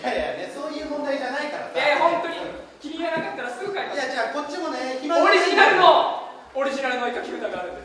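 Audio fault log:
No audible faults detected in this clip.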